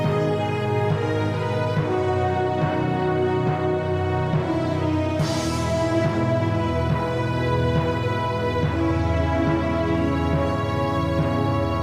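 No technical faults can be heard anywhere in this audio.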